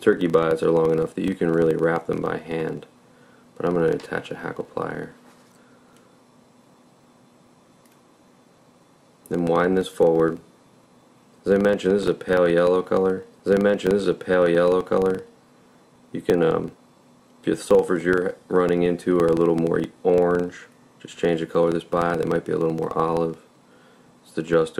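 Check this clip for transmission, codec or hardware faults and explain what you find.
There is one fault, present from start to finish. A filter restarted on every block resets its state, so each block opens with a tick. The ticks form a buzz near 23.4 Hz that tracks the sound's level, which fits a 2048-sample block.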